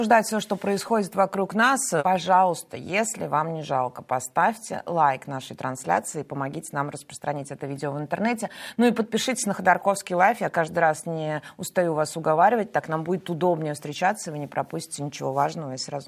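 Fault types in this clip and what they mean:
No technical faults present in the recording.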